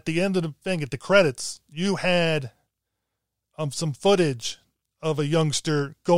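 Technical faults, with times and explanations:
Nothing technical stands out in this bit of speech; there's no glitch or fault to point to anywhere along the way.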